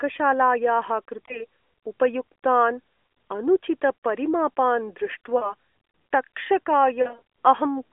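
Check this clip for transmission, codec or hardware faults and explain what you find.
Yes, there are lost AMR speech frames, heard as three brief glitches in speech that otherwise carries the narrowband AMR phone sound. At 1.26–1.44 s, just before "उपयुक्तान् अनुचितपरिमापान्", there is a short warble that fits one missing 20 ms frame. At 5.38–5.54 s, right after those same words, the sound dips, which fits about 40 ms lost. At 7.02–7.22 s a roughness is scattered across 0.2 s, the longest gap being about 40 ms. Each time, the decoder filled in from the last good frame at falling gain.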